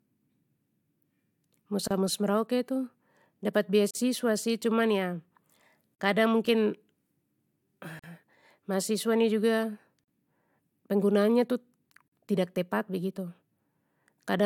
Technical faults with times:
1.88-1.91 gap at a join of encoded pieces
3.91-3.95 gap at a join of encoded pieces
5.95-5.99 gap at a join of encoded pieces
7.99-8.04 gap at a join of encoded pieces
10.04-10.08 gap at a join of encoded pieces
12.08-12.12 gap at a join of encoded pieces

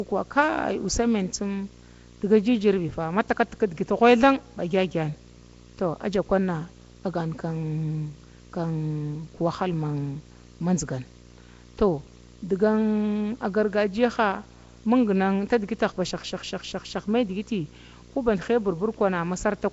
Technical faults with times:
0.00-19.73 video or display buzz
0.00-19.73 Nellymoser compression

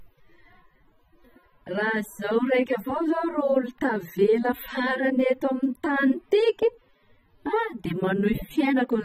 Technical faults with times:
0.00-9.05 AAC compression

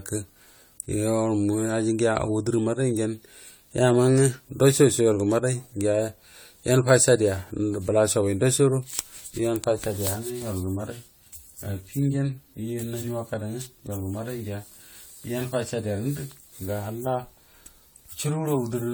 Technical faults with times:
0.00-18.93 generation loss

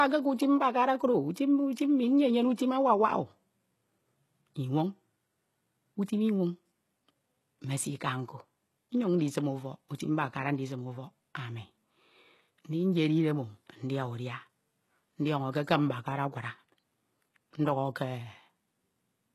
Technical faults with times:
0.00-19.34 HE-AAC compression

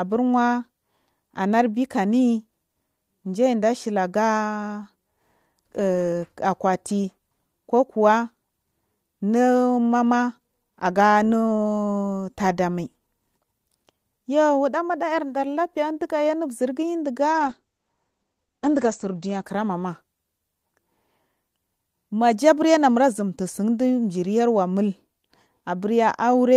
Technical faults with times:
17.32-20.81 call bitrate drop

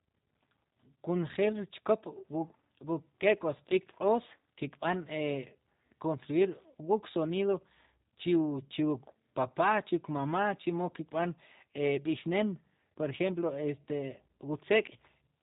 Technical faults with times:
0.00-15.42 G.729 codec

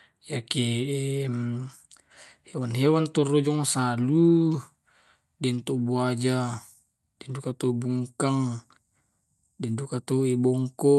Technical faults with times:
none

